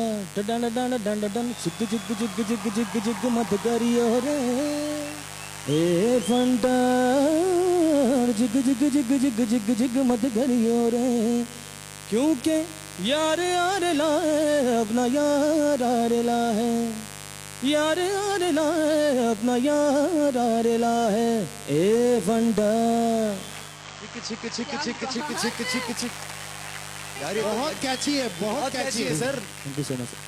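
A mains buzz at 50 Hz runs through the whole clip, roughly 15 dB below the sound. Sharp switching spikes twice per cycle spread harmonics into the kilohertz range, so it rasps rather than hums like a smooth low tone.

From 23.6 s to 25.39 s, the digital radio is blending to analogue FM over a 271 ms cross-fade. The level drops about 2 dB, and hiss sits some 35 dB down, a return of the same station rather than a clean dropout.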